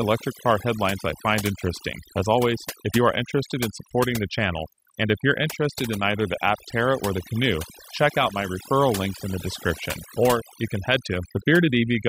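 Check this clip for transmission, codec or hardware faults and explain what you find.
The speech shows overdone noise removal from start to finish. A noise reducer was set too aggressively. It pulls individual frequency bands down whenever they sit near its noise estimate. Quiet voice detail vanishes too. Pauses fall to near silence with twinkling specks.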